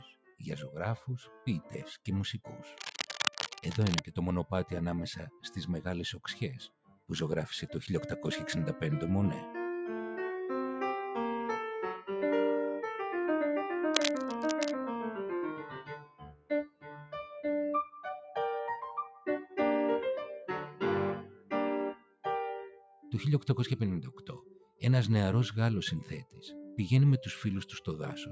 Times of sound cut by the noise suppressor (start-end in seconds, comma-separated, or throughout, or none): 0.00-0.40, 1.25-2.06, 5.30-5.49, 6.66-7.10, 15.64-17.15, 21.33-23.05, 24.18-24.81, 26.25-26.43